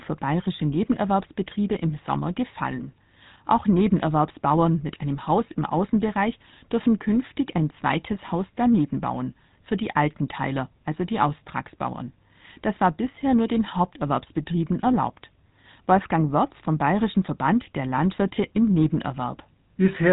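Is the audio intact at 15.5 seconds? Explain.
No. At 15.5 s, as throughout the clip, the speech carries GSM full-rate codec damage. The codec models the vocal tract and drives it with a regularly spaced pulse train that keeps only every third excitation sample, which fits a 13 kbps GSM stream. Nothing above 3.8 kHz survives, and the voice has a plainly audible buzzy, gravelly roughness. A simple telephone band-limit would sound muffled but smooth. The pulse-driven grit is what marks this as GSM.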